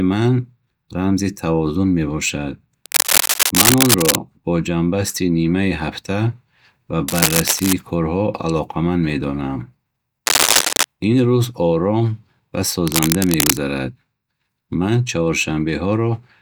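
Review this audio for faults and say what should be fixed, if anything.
Cable scratch noise at 2.86–4.16 s (after "рамзи тавозун мебошад"), 7.08–7.73 s (before "корҳо алоқаманд медонам"), 10.26–10.84 s and 12.87–13.58 s (after "рӯз ором ва"): dense, uneven rustling bursts roughly as loud as the speech, louder at 10.26 s, likely from a worn cable or connector changing contact resistance as it moves. Replace the cable or clean the connector, and secure it so it cannot shift while recording.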